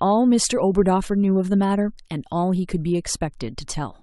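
From 0.47 to 0.49 s a corrupt frame is decoded: one damaged frame plays with misread values, giving a brief chirp-like burst near -20 dBFS, unlike a plain click or a dropout.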